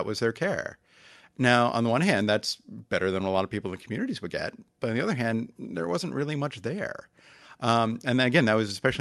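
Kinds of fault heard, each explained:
No faults can be heard in this speech. It has come through a call path whose coding keeps content up to about 12 kHz, with little audible above that.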